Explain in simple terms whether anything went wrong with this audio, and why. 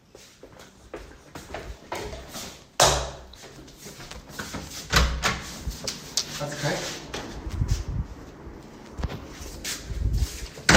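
Nothing went wrong with it.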